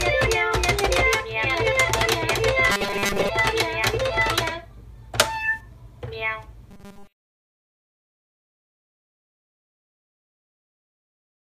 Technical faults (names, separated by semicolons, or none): robotic sound from repeated short buffers